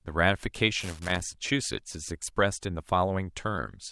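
A speech recording with loose connector crackle from 0.80 to 1.34 s: an irregular burst of scratchy crackle where a worn contact chops the signal, unlike steady, evenly scattered vinyl-style clicks.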